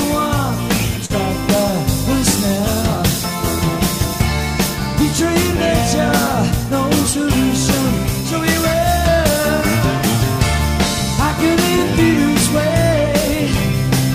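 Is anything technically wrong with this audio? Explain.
Yes. From 1.05 to 1.12 s there is a short concealed packet loss. About 40 ms of audio arrived too late to decode. The receiver patched roughly 43 ms by extending the preceding sound, then blended back, leaving a brief smear or wobble.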